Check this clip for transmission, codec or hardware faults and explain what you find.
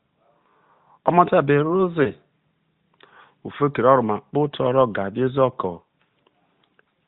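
One transmission fault stands out in this narrowband mobile speech, whose sound stops near 4 kHz. At 2.04 to 2.11 s there is a lost AMR speech frame. It sounds like a brief dip or warble, which fits a single lost 20 ms frame. The decoder replaced it by repeating the previous pitch and vocal tract settings at reduced gain. Unlike a clean dropout or click, the gap is filled with smeared, slightly synthetic sound rather than silence.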